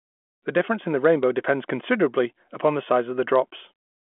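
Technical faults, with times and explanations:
Nothing faulty is audible: the speech sits in a 200 Hz to 3.4 kHz telephone band with nothing above 3.8 kHz, as expected of G.726 ADPCM at 40 kbit/s, and its coding noise stays faint at most.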